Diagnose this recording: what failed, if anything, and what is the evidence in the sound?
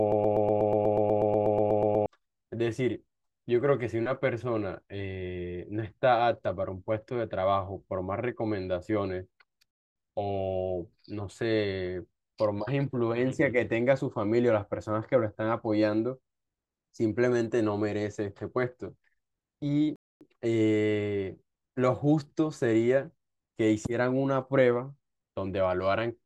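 A broken-record loop is already running when the clip begins and lasts until 2.06 s: a fragment of about 122 ms repeats exactly, back to back, 16 times. The likely cause is a stall at the playback or streaming stage that kept resending its last buffer, so the speech for those two seconds is lost.

There are two gaps between chunks, at 9.71 s and 19.96 s, each a 250 ms hole of silence. Their spacing fits audio stored or delivered in 10-second chunks, with padding or a late start inserted at each join. The interruptions break up the speech at those points.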